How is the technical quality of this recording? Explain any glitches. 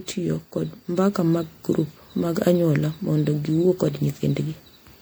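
The recording has one audible fault, present from start to finish.

Generation loss runs throughout the speech. The likely cause is repeated MP3 coding, the audio decoded and re-encoded around five times at a rate that fits 96 kbit/s. Each pass quantises on a shifted frame grid, so the codec's noise and missing spectral bands accumulate rather than staying fixed. The result is a swirling, hollow, smeared tone, worse than a single encode at that rate would give, with consonant onsets blurred.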